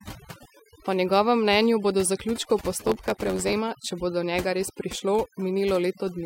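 A speech track sits over near-silent background flecked with twinkling specks throughout, the sign of overdone noise removal: the reduction was set so hard that frequency bands close to the noise estimate were pulled down or switched off, taking quiet voice detail with them. From 2.78 to 3.53 s a buzz at about 91.9 Hz appears and the speech hurries along 1.07 times faster with its timbre intact. That is a block size mismatch (truncated). One stage writes blocks longer than the next reads, consistent with 512-sample blocks, so each block's tail is discarded.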